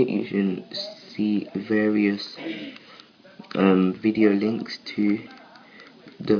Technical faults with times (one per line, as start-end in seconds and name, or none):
none